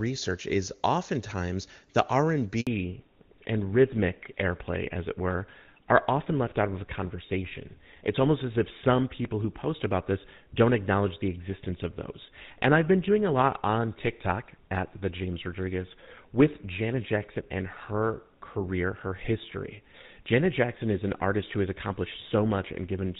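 At 2.61 s the speech cuts out in a handover gap. While the call was passed from one network to another, no speech frames arrived for about 60 ms, until 2.67 s. The sound fades within a few tens of milliseconds, leaves a brief dead silence, and then resumes. On a waveform this is a short flat stretch. A spectrogram shows a narrow vertical blank band across all frequencies.

From 2.67 s to the end, the call falls back to narrowband. Before the break the wideband HD Voice sound is clear, consistent with AMR-WB at its top rate of 23.85 kbit/s. After it, nothing remains above 4 kHz. The speech becomes duller and rougher, and the grainy texture points to a fallback to GSM full rate at about 13 kbit/s. On a spectrogram, the energy that reached toward 7 kHz stops abruptly at 2.67 s, leaving a hard ceiling at 4 kHz for the rest of the clip.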